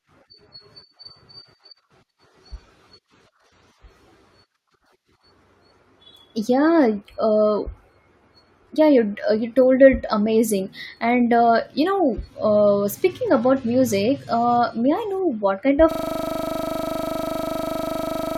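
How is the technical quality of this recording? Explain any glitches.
The recording has one serious fault, a system hang loop, which runs from 15.91 s to the end of the clip. At that point the speech stops progressing and a single 40 ms slice of audio repeats exactly, about sixty times in a row. The system froze while the sound hardware kept replaying the same ring buffer, which points to a 40 ms buffer. Because the loop is so short, it sounds like a steady buzz at 25 Hz rather than a stutter.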